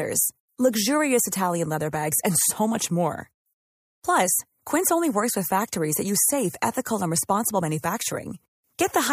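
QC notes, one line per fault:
No faults heard anywhere in the recording.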